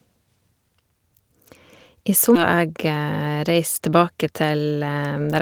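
At 2.35 to 2.37 s the speech jumps abruptly forward. About a second of talk is simply gone, with no silence or fill, and the two sides are butted together almost seamlessly. This is a skip ahead: a stretch of audio was discarded, either lost in transit or dropped by the jitter buffer when it overflowed while later audio was already queued. That cut the playout delay by roughly a second in one step.

From 4.31 to 5.37 s the speech sounds hurried, running at about 116% of normal speed while the pitch stays where it was. This is a jitter buffer speed-up. The buffer was holding more audio than its target, so the receiver trimmed many short slices, each one or a few pitch periods long, in rapid succession. Together they removed around a fifth of a second to bring the delay back down.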